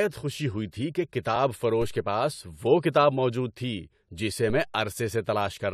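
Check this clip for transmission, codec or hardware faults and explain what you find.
Two DC steps interrupt the speech, at 1.82 s and 4.50 s. At each point the waveform's zero line jumps abruptly, as happens when a converter recalibrates or an input carrying an offset is switched in. The offset then decays away, as it would through a high-pass around 2 Hz. Each step is heard as a low thump or click while the speech carries on unchanged. On the waveform the trace lurches off centre and drifts back. A spectrogram shows a brief vertical stripe concentrated at the bottom.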